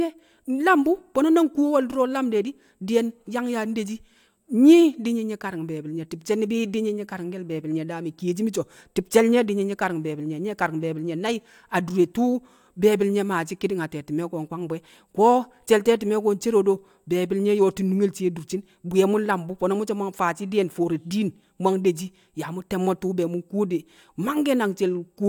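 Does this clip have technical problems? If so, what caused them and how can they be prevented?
No, the speech signal holds steady throughout, with no technical faults that need a cause traced or a fix applied.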